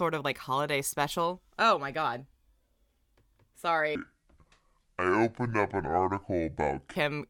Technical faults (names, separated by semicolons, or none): section at the wrong speed